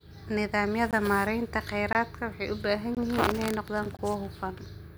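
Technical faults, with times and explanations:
0.91–0.93 s, 1.93–1.95 s (just before "waxay u baahan"), 2.95–2.97 s (just after "waxay u baahan") and 3.97–3.99 s: gap between chunks. The speech arrives in 1-second chunks, and each join inserts 20 ms of silence, heard as short dropouts recurring once per second while no speech is lost.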